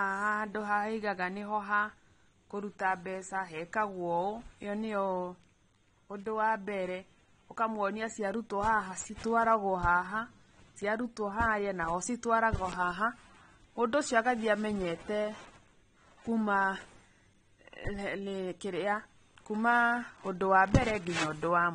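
From start to finish the speech sounds dull and smeared, with nothing above about 9.7 kHz and a warbly, fizzy edge on sibilants. That points to AAC compression, likely AAC-LC squeezed to a low bitrate around 32 kbps, thinning and cutting the spectrum.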